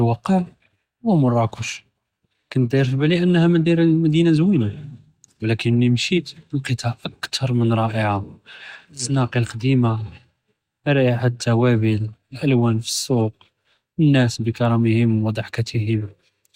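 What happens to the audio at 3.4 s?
Nothing goes wrong at 3.4 s; the speech runs on intact through that moment, with no dropout, click or distortion to be heard.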